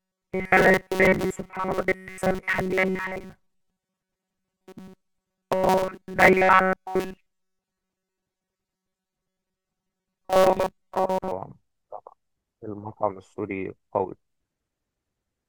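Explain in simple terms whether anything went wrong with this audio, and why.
From the start to about 11.31 s, the speech turns into a stiff, metallic buzz near 188 Hz. This is robotic sound from repeated short buffers. The likely cause is late audio, with the same tiny slice of about 5 ms replayed over and over, covering most of the sound.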